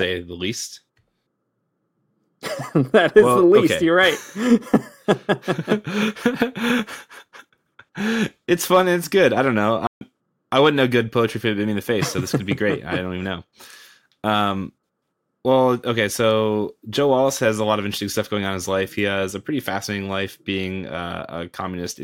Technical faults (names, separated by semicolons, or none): playback stall